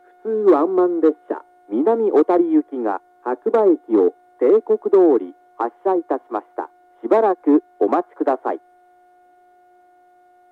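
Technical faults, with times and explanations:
No technical faults can be heard anywhere in this recording.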